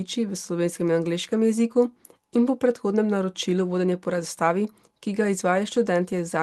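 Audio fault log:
No faults detected in this speech.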